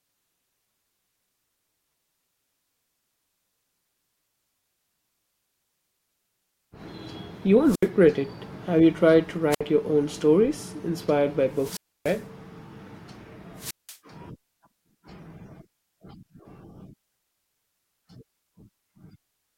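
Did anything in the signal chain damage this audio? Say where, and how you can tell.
Yes, the wireless microphone link, ahead of the converter, shows four wireless microphone squelch dropouts: 7.64 to 7.89 s, 9.51 to 9.61 s between "you tried to" and "your own stories inspired", 11.52 to 12.25 s just after "own stories inspired by", and 13.57 to 13.98 s. In each, hiss swells, then the audio drops to a near-silent hole of 73, 62, 290 and 183 ms. The FM carrier fades until the receiver's squelch gates the output shut.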